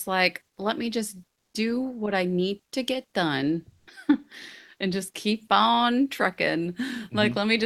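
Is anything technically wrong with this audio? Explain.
Yes. Comfort noise in place of the background appears at 1.33–1.53 s, between "like let me just" and "do what I need", about 7 dB quieter, and at 3.79–3.87 s after "need to get done", about 2 dB louder. In both pauses the real background gives way to steady, featureless synthetic noise, likely from Opus discontinuous transmission.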